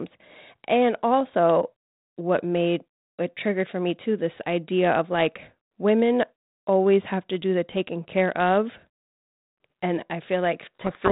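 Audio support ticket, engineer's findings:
Harsh, rasping distortion swamping the speech from 10.75 s to end of clip. Codec payload misread on G.726 path (32 kbit/s, band-limited below 4 kHz): bit order of code words reversed, so decoder applies wrong difference values to its adaptive predictor. Persists until packing formats match again.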